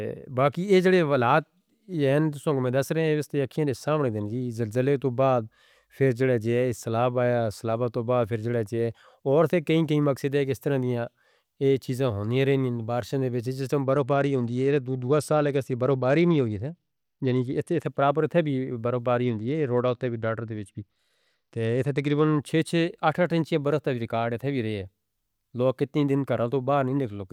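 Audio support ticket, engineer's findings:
Bluetooth SBC bit pool drop, 13.84–17.84 s and 19.24–22.40 s: dulled treble, gritty noise. Starved upper sub-bands, coarse quantisation; fits bit pool 28 falling to 12, around 96 kbps.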